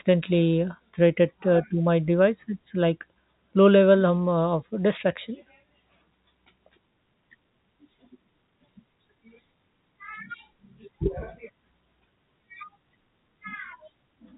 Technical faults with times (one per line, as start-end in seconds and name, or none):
none